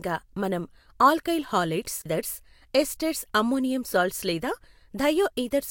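A CD skip occurs at 2.02 to 2.06 s in this speech clip. The player's laser lost its track, most plausibly through a knock or a surface flaw on the disc, and landed on another turn of the spiral. The output mutes for roughly 40 ms, a short gap. When the speech resumes, it picks up at a different point in the recording rather than continuing where it broke off, so the flow of speech lurches abruptly.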